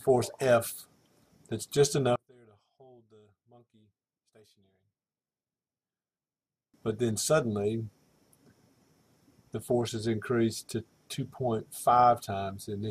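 From 2.16 s to 6.74 s the sound falls by about 30 dB, leaving a faint residue with the centre gone. The likely cause is one channel inverted: a polarity-reversed stereo side cancels the shared content when summed to mono.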